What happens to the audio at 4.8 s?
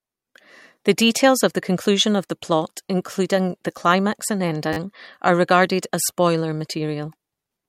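Just before 4.8 s, from 4.73 to 4.77 s, there is a repeated buffer. New audio arrived late, so the device replayed the last piece of speech four more times. Each piece is 10 ms, which fits a small buffer, so the repeats make a brief buzz with hard joins.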